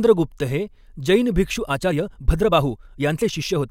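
From 1.49 s, right after "हे जैन", to the end, the speech runs about 1.35 times faster with its pitch unchanged, a time-stretched section. It sounds rushed, likely from software dropping short slices to shorten the passage while preserving pitch.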